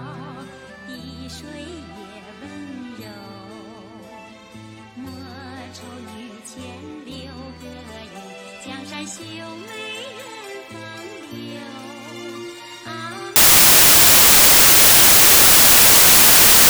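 From 13.36 s to the end, the sample bytes are reassembled wrongly, shifted by a byte or in swapped order, so samples are built from the wrong bytes. Rapidly changing low-order bits become each value's dominant part, turning the sound into loud, harsh broadband noise.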